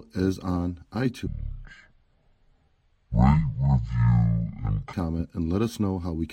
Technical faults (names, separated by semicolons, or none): section at the wrong speed